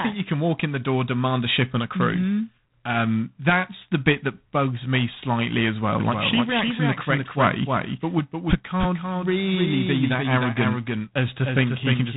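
From the start, the speech carries G.726 ADPCM damage. The codec sends only a few bits per sample describing how each sample differs from a running prediction, and with so few bits the prediction error becomes a coarse, rasping hiss. Unlike steady background noise, this hiss rises and falls with the speech itself. The harshness fits the 24 kbit/s mode, and nothing passes above 3.9 kHz.

At 6.00 s, a doubled audio track begins and runs to the end. A second full-band copy of the speech trails the first by roughly a third of a second, around 5 dB quieter. It is distinct from a room echo or reverb because it is a single clean repeat with no decay tail and no room colouring, and it starts abruptly rather than building up. The likely cause is the same signal being mixed in a second time through a slower path.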